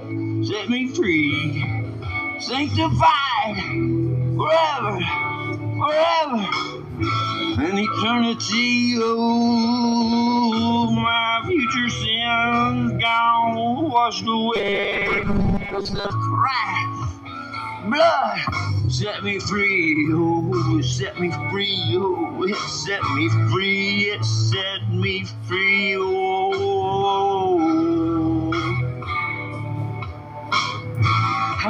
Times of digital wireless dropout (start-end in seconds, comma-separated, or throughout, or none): none